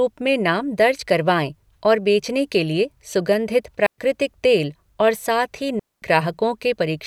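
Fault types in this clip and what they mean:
Digital wireless dropout: the receiver loses too much data and mutes, leaving clean near-silent gaps of about 0.12 s and 0.23 s with no noise burst around them.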